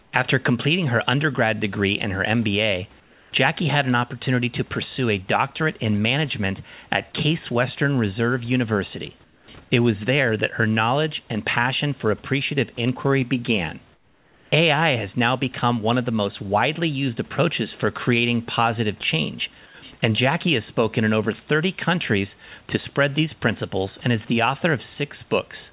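Comfort noise in place of the background appears at 0.02–0.12, 3.0–3.32, 9.24–9.48 and 13.94–14.52 s (after "for appreciative inquiry began"). In each pause the room hiss becomes a flat, featureless noise, about 2, 4, 8 and 6 dB quieter, likely from discontinuous transmission muting the sender. The rest of the sound is band-limited, with nothing above 4 kHz.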